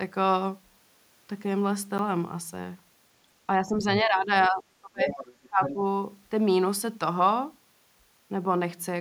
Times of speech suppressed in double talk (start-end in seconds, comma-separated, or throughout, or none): 3.61-5.19, 5.47-5.80